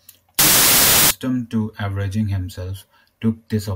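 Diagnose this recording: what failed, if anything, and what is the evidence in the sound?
A sample-format conversion stage misread the sample width, apparently taking packed 24-bit data as 32-bit. From 0.39 to 1.11 s, just before "to avenging", loud noise buries the speech, which runs 1.33 times fast and raised in pitch, because mismatched bytes form most values.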